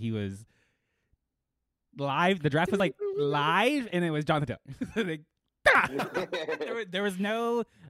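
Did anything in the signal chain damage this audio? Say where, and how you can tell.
Yes. Audio missing between chunks, likely at the recorder's 3-second chunk boundaries: about 50 ms skipped at 2.8 s, after "draft was", and at 5.75 s.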